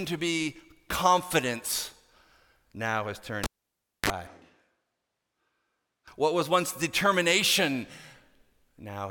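At 3.44 s a pop cuts the speech to near silence for about 0.61 s. A short 37 ms burst of 50 Hz buzz and a second pop follow before sound returns at 4.10 s. This is a cable pulled and plugged in, with the buzz coming as the plug's tip touched first.

From 4.27 s to 6.08 s the speech turns suddenly roomy and hollow, thin in the bass and about 5 dB quieter, with room noise only some 25 dB below it. This is likely a switch to a distant microphone, and it switches back just as abruptly.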